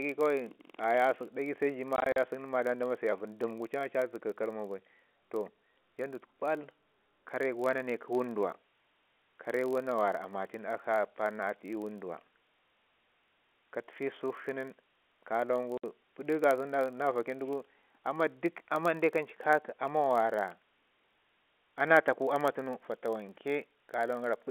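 Speech over a telephone-band line, limited to roughly 250 Hz to 3.4 kHz. A block size mismatch (padded) runs throughout. Each block has a short zero-filled gap, which fits a 1,024-sample read buffer, producing a steady 43.1 Hz buzz. The slowdown is negligible, 0.999 times normal speed. Packet loss filled with silence chops the sound twice. From 1.96 to 2.16 s, 100 ms goes missing in scattered holes no longer than 40 ms. At 15.78 to 15.84 s, one 60 ms hole opens. The hole sizes suggest 20 ms packets. Low bit depth with dither starts at 7.92 s and lasts to the end. At 10 bits, it adds an even, constant hiss about 40 dB below the signal.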